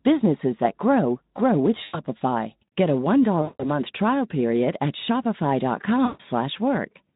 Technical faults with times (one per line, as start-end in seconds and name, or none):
1.83-1.99 VoIP packet loss concealed by the speech codec
3.42-3.71 VoIP packet loss concealed by the speech codec
6.05-6.21 VoIP packet loss concealed by the speech codec